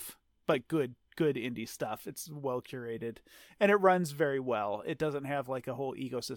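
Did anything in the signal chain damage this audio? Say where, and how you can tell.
No, nothing in the signal chain damaged this audio.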